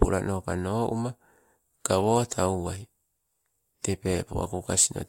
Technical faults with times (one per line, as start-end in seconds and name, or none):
0.00-5.08 resampler restarted on every block